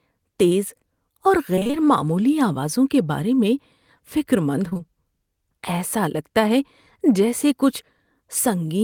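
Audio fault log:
1.55–1.75 s, repeated packet loss (robotic sound): within this 0.2 s stretch of speech, five separate gaps take out about 100 ms in total, the longest about 21 ms, so roughly half the span is patched rather than real. Each hole is bridged by extending the preceding sound, and the next one arrives before the voice can settle, giving a choppy quality with pieces missing. On a spectrogram, the harmonics turn into repeated flat, smeared blocks with sharp seams. The waveform shows periodic copies where the natural variation should be.
4.69–4.81 s, short concealed packet loss: three losses of about 20 ms each run back to back, beginning at 4.69, 4.73 and 4.77 s. The receiver covers each one by carrying the last pitch forward, or shaped noise where the sound was unvoiced, and then crossfades back into the real signal. The result is a brief smear or wobble, and a short consonant here may drop out. 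A spectrogram shows harmonics frozen level across each gap of about 20 ms. The waveform shows repeated cycles with soft joins.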